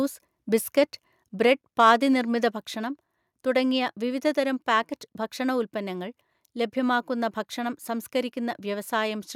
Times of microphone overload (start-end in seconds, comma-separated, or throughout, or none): 1.80-1.90